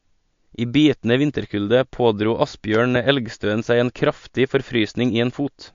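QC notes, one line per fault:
throughout MP3 compression: treble stops dead near 7.2 kHz with watery, swirly speech, likely a low-bitrate MP3 around 48 kbps, unlike plain low-pass filtering's clean dullness.
2.75–2.98 s loud pop: two sharp pops roughly 10 dB above the speech, right after "bitende vinterkulde pådro", likely a voltage step; speech continues underneath, unlike a dropout.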